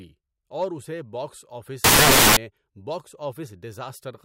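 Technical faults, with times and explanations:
1.84 to 2.37 s, samples built from the wrong bytes: just after "اور اسے باکس آفس" the speech gives way to half a second of loud, harsh broadband noise. Each sample's bytes get assembled wrongly, so the fast-jittering low bits become the bulk of every value.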